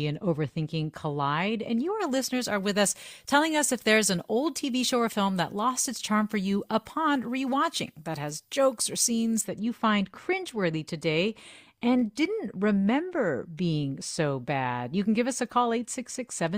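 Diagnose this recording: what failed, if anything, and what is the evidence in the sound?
Pre-emphasis left on, at the transmission or playback stage where de-emphasis should have been applied. From 2.00 s to 9.41 s, ending just before "that you find cringeworthy", the speech turns thin and bright, with sibilants spitting, and the treble stands about 14 dB above 1 kHz at 10 kHz. That fits the FM 75 µs curve being applied without its matching cut. Unlike a fixed treble-shelf EQ, the lift keeps climbing steadily with frequency, and the abrupt switch on and off points to a de-emphasis stage that was bypassed.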